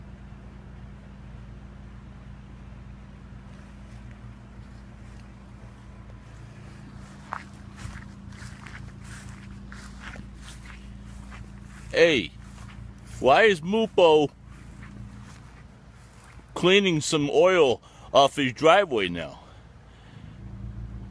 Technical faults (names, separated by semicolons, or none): none